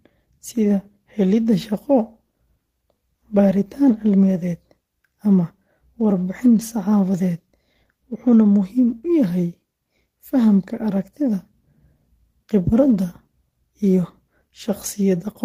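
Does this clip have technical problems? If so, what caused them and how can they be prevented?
No, nothing in this speech recording points to a technical fault, so there is no cause to trace and nothing to prevent.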